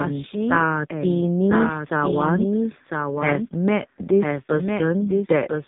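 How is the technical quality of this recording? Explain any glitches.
The recording is poor, with two faults running through the whole clip.

Throughout the speech, a second copy of the same audio trails about a second behind, a few decibels quieter, with no reverb tail or room colour. This doubled audio track likely comes from the signal being captured twice, once through a slower path, so the copies overlap out of step.

Across the entire clip, the speech sounds thin, buzzy and synthetic, with nothing above 3.8 kHz. This is the AMR narrowband mobile codec, which rebuilds the voice from a crude vocal-tract model and a few pulses. The heavy damage fits its lowest bit rates, around 5 kbps.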